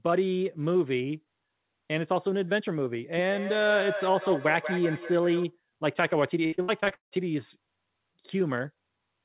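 From 3.2 to 5.58 s there's feedback echo between two devices. Two endpoints in the same room are on the call, so one plays out what the other's mic sent, and that mic catches it again. Each echo canceller only knows about its own loudspeaker, so nothing stops the loop. You hear the speech come back roughly every fifth of a second, thinner and ringier each pass, peaking at about 9 dB under the direct voice.

Then from 6.46 to 7.14 s there's repeated packet loss, and it sounds robotic. Packets keep going missing, and the receiver covers each hole by stretching out the last bit of sound it had. More than half of that stretch is patched this way, and the longest hole runs about 0.18 s. The result is choppy speech with chunks gone. Throughout, the band stops dead at 4 kHz, which fits a G.711 A-law call path.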